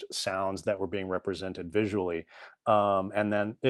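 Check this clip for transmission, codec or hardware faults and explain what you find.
One transmission fault is audible, a short concealed packet loss. From 0.75 to 0.79 s the speech briefly smears and wobbles. About 20 ms of audio never arrived in time, so the receiver extended the preceding sound to cover the gap and then blended back into the real signal. The surrounding audio carries the usual Opus coding character, with content ending around 12 kHz.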